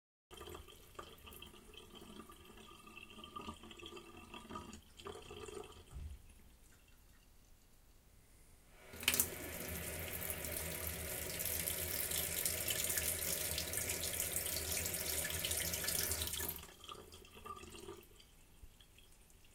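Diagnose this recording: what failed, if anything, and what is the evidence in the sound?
The clip opens on silence until 0.31 s, when the sound appears abruptly mid-event, with no natural attack or fade-in. This is a cut-off start: capture or streaming began late, so the recording joins a sound already underway rather than its onset.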